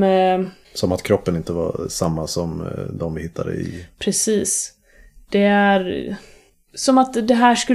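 The speech recording contains no audible technical faults. Nothing interrupts or alters the sound at any point, so there is no event to place in time.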